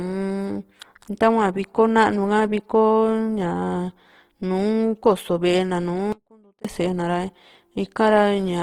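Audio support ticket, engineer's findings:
Opus compression, whole clip. Speech sounds rough and grainy, with a noisy texture on tones. Bandwidth stays full, up to about 20.2 kHz. Damage plainly audible. Likely cause: Opus in CELT music mode, filling starved bands with folded or noise content. Grain level fits a rate near 16 kbps.

Audio dropout to a faint residue, 6.12 to 6.65 s, just after "na nùù". Signal cuts abruptly for 0.52 s. Gap holds only faint sound, about 30 dB down. Likely cause: upstream signal lost while the downstream path stayed live.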